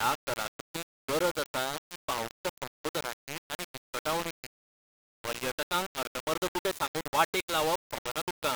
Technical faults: low bit depth without dither

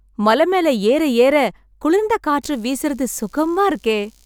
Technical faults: computer activity noise

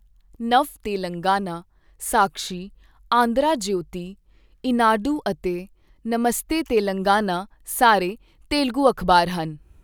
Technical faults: none

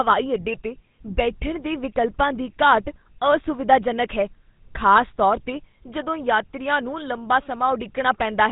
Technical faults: GSM full-rate codec

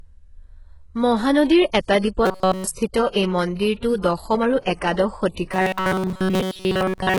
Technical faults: HE-AAC compression; robotic sound from repeated short buffers; pre-echo

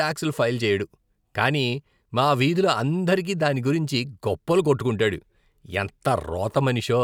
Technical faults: none

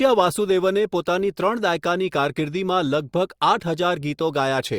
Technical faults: none

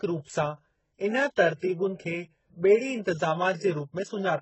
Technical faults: transcoding between lossy codecs

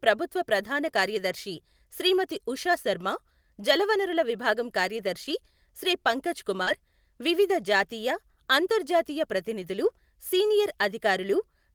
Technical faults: lost packet rebuilt from error correction; short concealed packet loss

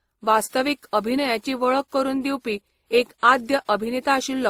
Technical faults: transcoding between lossy codecs

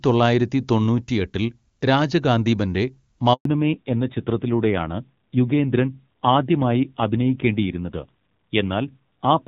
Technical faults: handover gap; fallback to narrowband

